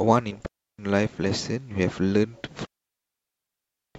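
Clean holes of near silence, with no noise burst on either side, at 0.46 to 0.79 s and 2.65 to 3.95 s: digital wireless dropouts, where the receiver mutes after losing too much link data.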